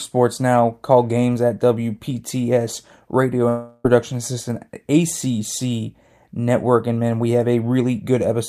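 From 3.48 to 3.85 s the speech breaks off and the last sound before the break is stretched into a buzzy, hissing tone that fades over about 360 ms, with no stretch of true silence, before speech resumes with that portion simply gone. This is a long network dropout: the likely cause is that packets stopped arriving for over a third of a second, and the receiver filled the hole by extending what it last had.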